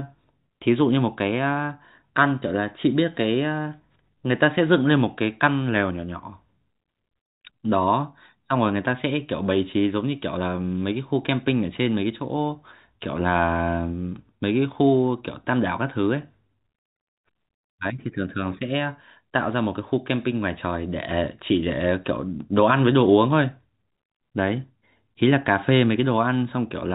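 Nothing faulty can be heard in this speech recording.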